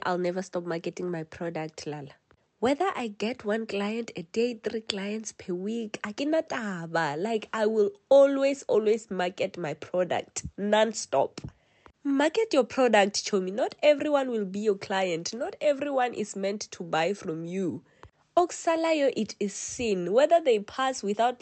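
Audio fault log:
No faults heard anywhere in this audio.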